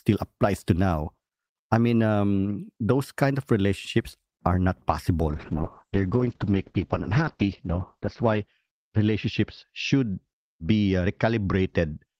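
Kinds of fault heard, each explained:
Call bitrate drop: from 5.28 s the encoder falls from 40 to 8 kbps, speech turning coarse and watery, with everything above 8 kHz cut off.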